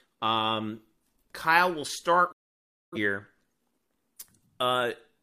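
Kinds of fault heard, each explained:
Digital broadcast dropout: The receiver stopped getting usable frames, either because the signal was lost or because frames failed their error check. It muted the output until valid data returned. In this speech clip the sound fades out over about 8 ms at 2.32 s and stays silent until 2.98 s, a gap of roughly 0.6 s. Whatever was transmitted during that span is gone rather than concealed or repeated.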